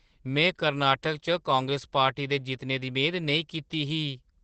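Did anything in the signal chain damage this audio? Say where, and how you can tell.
Yes, at the codec: Opus voice compression throughout leaves the speech muffled, hoarse and faintly robotic, with SILK's coarse excitation coding at what sounds like about 12 kbps.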